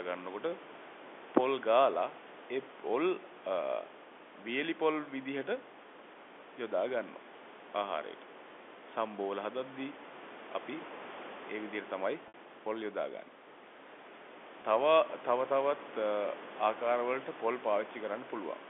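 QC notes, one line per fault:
12.28 to 12.34 s and 14.62 to 14.64 s, packet loss with pitch repetition: two brief dropouts where the receiver fills the hole by replaying the last pitch period of the speech. The 60 ms gap at 12.28, which fits three 20 ms packets going missing, gets a short held, buzzy drone that fades as it runs past about 50 ms, then a quick cross-fade back in. The 20 ms one at 14.62 is just a tiny stuck buzz.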